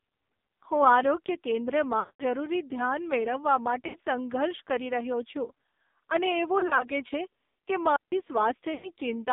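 AMR narrowband mobile codec, throughout: the speech is squeezed into a 250 Hz to 3.7 kHz band and rebuilt from a pulse-driven vocal-tract model. The heavy buzzy, synthetic texture points to one of AMR-NB's lowest modes, around 5.9 kbps.

Lost AMR speech frames, 2.00 to 2.23 s: about 200 ms of frames failed, so the decoder kept repeating its last pitch and filter settings at falling gain. The sound smears, drones briefly, and fades toward silence before recovering roughly. Shorter losses follow at 3.88 to 3.97 s, a 60 ms warble-dip, and 6.60 to 6.87 s, where 20 ms gaps scattered across about 200 ms give a stuttering wobble just before "છે કે".

Digital wireless dropout, 7.96 to 8.12 s, right after "છે કે": the wireless link lost too much data and the receiver muted for about 160 ms. It is a clean hole of near silence with a very short fade and no noise burst on either side.

Lost AMR speech frames again at 8.74 to 8.88 s: about 100 ms of concealment draws the sound out with fading gain before it returns thin and rough.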